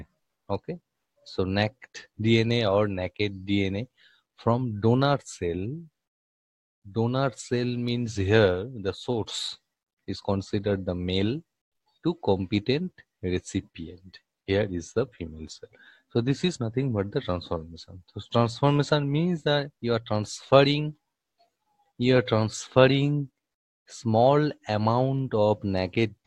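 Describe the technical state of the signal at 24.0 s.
At 24.0 s the signal is intact, with no audible technical fault at that point.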